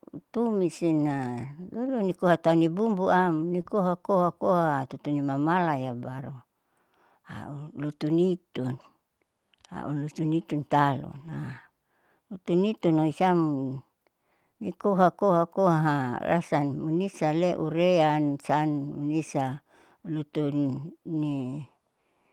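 At 3.61 s comes a short concealed packet loss. About 20 ms of audio never arrived in time. The decoder covered the hole by extending the preceding sound, then blended back. It is heard as a brief smear or wobble.

From 3.65 to 3.67 s, a lost packet is rebuilt from error correction. The next packet carried a coarse copy, so nothing drops out, but those 20 ms sound rougher and noisier. At 11.15 to 11.33 s, the same happens over 100 ms, which fits five separate lost packets. The roughness is longer there.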